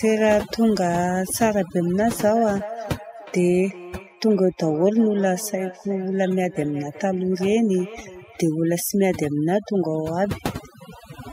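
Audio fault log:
Throughout: overdone noise removal. The gaps between phrases fall to near silence speckled with twinkling. A noise reduction stage was pushed too hard. It judges each narrow frequency band against its estimate of the noise and sinks any band that comes close. Isolated bands flicker on and off as they cross that line, and the softer parts of the speech get pulled down along with the noise.
2.04 s to 8.53 s: feedback echo between two devices. Speech returns as a thinner, ringing copy trailing roughly 0.4 s behind, peaking at about 16 dB below the direct voice. Two devices in the same room are joined to one call. One replays what the other's microphone sends, and that microphone picks up the playback and sends it round again. Neither echo canceller removes it, because each handles only its own device's output.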